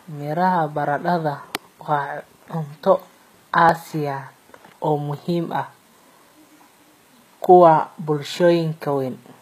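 Speech with HE-AAC compression audible throughout: the top end sounds rebuilt rather than real, with gritty, lispy s sounds, which fits a low bitrate around 20 kbps. At 3.69 s there's a tiny skip ahead in the sound, likely a dropped buffer (overrun) that lost a sliver of audio and spliced the two sides together.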